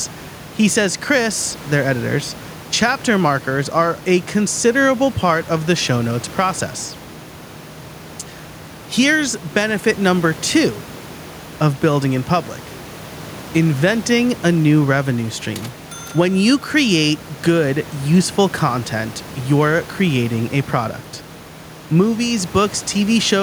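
No technical faults can be heard anywhere here.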